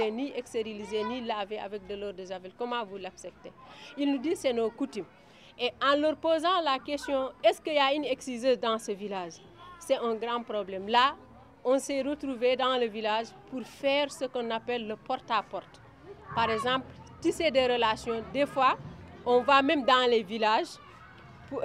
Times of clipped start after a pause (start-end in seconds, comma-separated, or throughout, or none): none